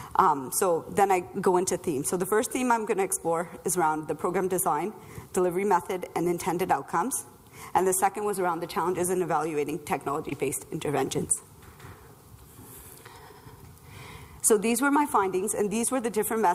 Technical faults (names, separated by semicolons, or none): short concealed packet loss